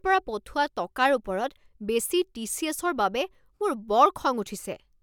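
No technical faults can be heard anywhere in the speech.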